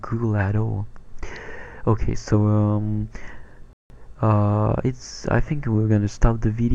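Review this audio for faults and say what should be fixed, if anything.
At 3.73 s the sound stops dead for 170 ms, resuming at 3.90 s: a playback stall, likely the player starving for data or its thread blocking. Larger playback buffering and a non-blocking audio thread should prevent it.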